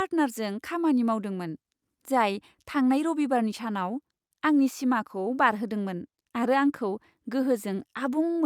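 No audible technical faults.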